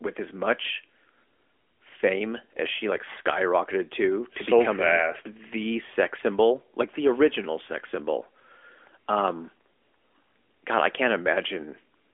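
Speech carried over an AMR-NB narrowband mobile link at 12.2 kbps, band-limited as that path dictates with nothing above 3.6 kHz, and no technical faults to report.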